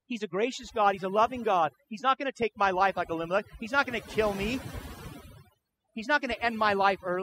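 Overdone noise removal runs throughout the speech. Aggressive reduction cut bands near the noise floor, leaving near-silent gaps with twinkling specks.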